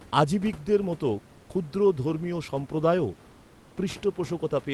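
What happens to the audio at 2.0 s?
Nothing goes wrong at 2.0 s; the speech carries straight through that moment intact, with only the low room noise well beneath it.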